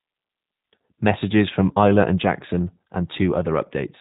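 G.729 codec damage runs throughout this speech clip. Nothing above 3.8 kHz survives, and the rough, synthetic edge from rebuilding speech from sparse pulses fits an 8 kbit/s stream.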